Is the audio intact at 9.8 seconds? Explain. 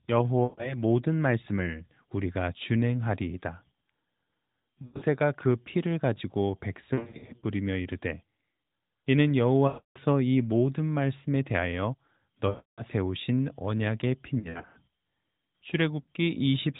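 No. From 9.68 to 9.98 s the speech stretches into a smeared, drawn-out hold, fades to silence, then returns weak or rough. These are lost AMR speech frames: the decoder repeated its last good settings with falling gain across a 280 ms gap.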